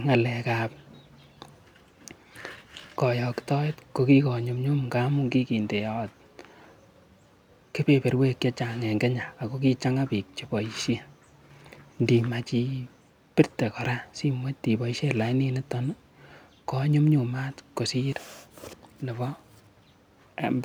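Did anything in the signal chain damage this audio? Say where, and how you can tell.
No, nothing in the chain damaged it.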